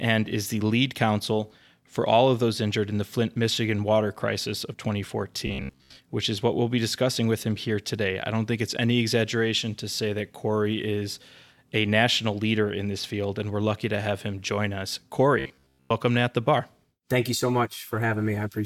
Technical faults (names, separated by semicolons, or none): robotic sound from repeated short buffers